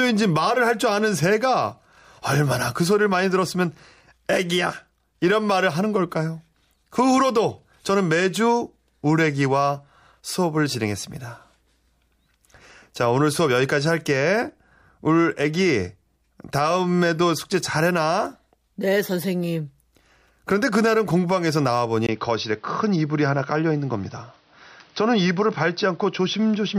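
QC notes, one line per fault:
22.07–26.79 s, input switched to a poorer device: after a 20 ms gap the speech turns dull and boxy, with nothing above 6 kHz, a faint new background noise well below it and little level change, likely from a switch to a narrower-band microphone.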